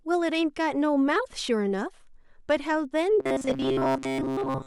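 Robotic sound from repeated short buffers runs from 3.20 s to the end of the speech at 4.66 s. The voice turns into a rigid, metallic buzz fixed at 133 Hz that still roughly tracks the syllables. The likely cause is audio arriving too seldom, so a fragment of about 7.5 ms is replayed over and over in place of the real signal. Most of that stretch, around two thirds or more, is repeated material rather than fresh sound.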